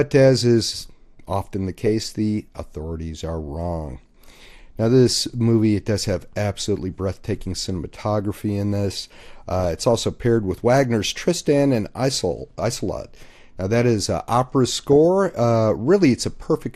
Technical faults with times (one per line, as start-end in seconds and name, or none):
0.00-16.75 MP2 compression
9.60-9.64 DAB burbling
14.93-15.05 DAB burbling